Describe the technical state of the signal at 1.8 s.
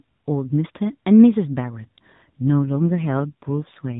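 At 1.8 s the speech is intact, with no dropout, click or distortion, only the normal 4 kHz band limit of the AMR narrowband mobile codec it passes through.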